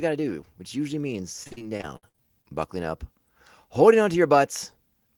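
Speech with repeated packet loss (robotic sound) from 1.43 to 2.46 s: ten gaps, the longest 56 ms, with about 320 ms missing in total, and roughly 29% of that stretch is patched sound that continues the last received audio. On a spectrogram the patches appear as frozen, smeared harmonic bands that break off abruptly. The waveform shows a choppy run of repeated, near-identical segments.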